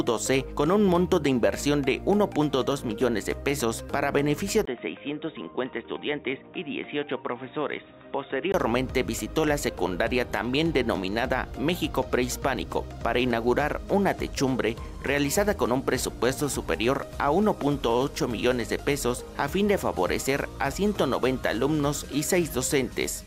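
At 4.65 s there is a brief dropout of about 20 ms. The sound then turns dull and boxy, with nothing above about 3.8 kHz. It also drops a few decibels in level, and faint new background noise sits well below it. At 8.54 s the full bandwidth returns. This pattern points to an input switched to a poorer device, likely a narrower-band microphone or headset call profile, with its own tone and noise.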